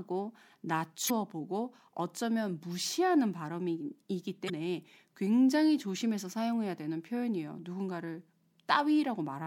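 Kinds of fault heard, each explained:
Damaged data in a compressed stream: some corrupt bytes in the coded audio trip up the decoder, which misreads those frames and has to resync, so you get two brief garbled blips in the speech, at 1.06 s and 4.46 s, each about 44 ms long.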